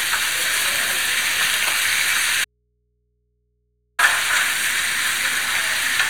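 From 2.45 s to 3.99 s the sound drops out for about 1.54 s, leaving only a low mains hum far below the signal level. This audio dropout to a faint residue cuts in and out abruptly, likely a broken upstream feed into a still-live, unterminated input.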